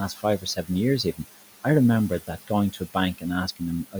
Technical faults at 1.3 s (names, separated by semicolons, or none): noise suppressor artifacts